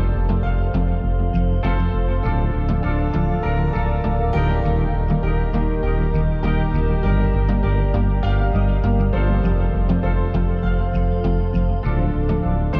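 No technical faults can be heard anywhere in the recording. Nothing in the signal path draws attention to itself at any point.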